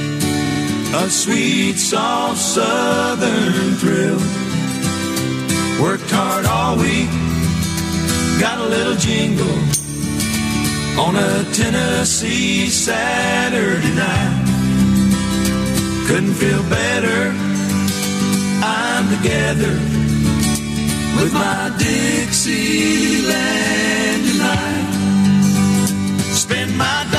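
At 0.45 s a short slice of about 46 ms plays four times over, then at 23.01 s a 93 ms slice plays three times: classic repeated frames, where compressed frames got sent or written again, giving a stutter and lengthening the sound.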